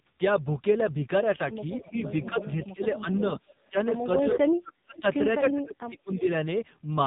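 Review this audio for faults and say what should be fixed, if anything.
AMR narrowband mobile codec throughout. The 5.9 kbps coding sounds buzzy and synthetic, with nothing above 3.8 kHz. Carry the call on a wideband codec or a higher bitrate.

Speech suppressed in double talk from 1.8 to 3.07 s and from 3.7 to 6.25 s. The speech dips by up to about 20 dB, then about 35 dB. This is likely an echo canceller muting during overlap. Tune the canceller's double-talk detection.

Echo leak at 2.13 to 2.66 s, 3.47 to 4.04 s, 4.96 to 5.0 s and 6.13 to 6.19 s. A copy arrives 303 ms late, about 15 to 30 dB down, likely from a loudspeaker's residual echo. Improve echo cancellation at the far end.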